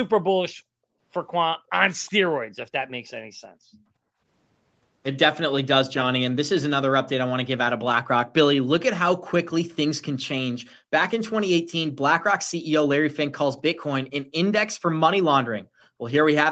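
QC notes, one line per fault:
1.56–1.72 s, 2.48–2.52 s, 3.24–4.21 s, 10.79–10.88 s: background gated by the echo canceller. Room sound dips by about 23 to 40 dB while the canceller clamps the microphone, then recovers.
2.06–2.11 s: echo leak. A faint, brief copy of the speech returns 363 ms late, likely loudspeaker sound that the echo canceller left in.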